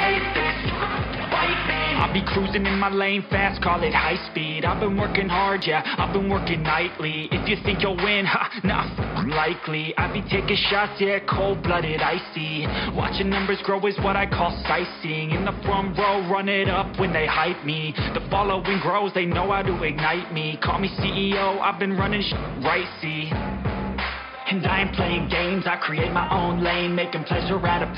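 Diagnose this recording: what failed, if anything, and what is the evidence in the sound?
Nothing failed here; I listened for trouble at every stage from the wiring through to playback and heard nothing that points to a fault.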